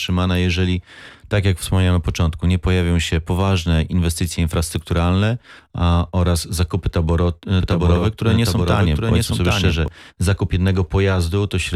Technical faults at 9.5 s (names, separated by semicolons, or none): doubled audio track